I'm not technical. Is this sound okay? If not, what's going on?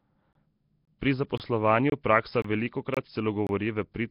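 No. Gaps between chunks occur at 0.33, 0.85, 1.38, 1.90, 2.42, 2.94 and 3.47 seconds. Each is a hole of about 23 milliseconds; no speech is lost, but it is chopped at each join. The audio was handled in half-second pieces, and each join left a sliver of silence before the next piece started. Because the pieces are equal, the holes land at a steady rhythm, like a stutter.

Nellymoser compression is the likely cause of the rough, hissy, underwater sound throughout. Nellymoser was the microphone codec of old Flash. It squeezes speech into very little data, so quieter parts of the sound get no real detail and are replaced with noise. That creates the hissy halo and smeared quality. It also removes everything above about 5.3 kHz, which makes the speech sound dull and muffled.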